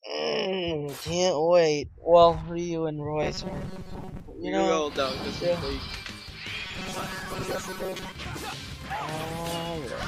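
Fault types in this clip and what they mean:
Robotic sound from repeated short buffers: The sound turns into a rigid, metallic buzz from 3.23 to 4.20 s and again from 6.65 to 8.13 s. The buzz holds a fixed pitch of 188 Hz. That pitch fits a chunk of about 5.3 ms played over and over. The likely cause is new audio arriving too seldom, so the last short buffer gets repeated. About half of each stretch is repeated material. The real audio underneath is skipped.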